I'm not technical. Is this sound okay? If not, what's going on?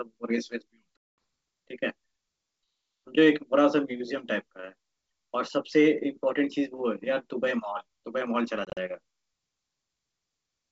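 No. Packet loss on an ADPCM call cuts out the speech from 0.97 to 1.18 s, a 210 ms hole, and again in short scattered gaps from 8.65 to 8.78 s. Chunks of the call never arrived and became silence, and the decoder briefly loses track, so speech returns slightly distorted.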